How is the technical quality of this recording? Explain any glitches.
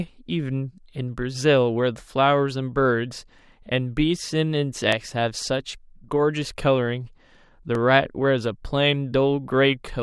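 Two short glitches stand out in this speech recording, at 4.92 s and 7.75 s. Both are likely dropped samples: about 0.7 ms of the stream went missing each time, so the waveform leaps straight to a later value. No sound is lost, but each leap produces one sharp click that shows as a narrow streak across all frequencies.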